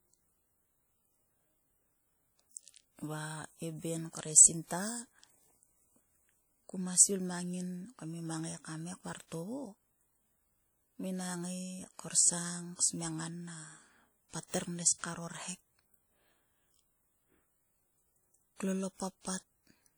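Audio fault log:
Throughout, WMA compression, likely: the speech has an obvious ringing, washy quality, with a hiss that swells and fades with the voice. That points to a transform codec working at a low bitrate, around 48 kbps, where long blocks spread quantisation noise over tens of milliseconds and weak spectral detail gets dropped. The top end still reaches about 20.1 kHz, so the damage is smeared texture rather than lost treble.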